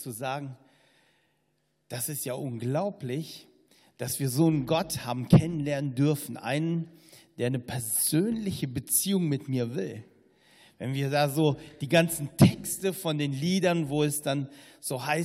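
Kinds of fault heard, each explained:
Nothing stood out on careful listening; no faults could be heard anywhere in the clip.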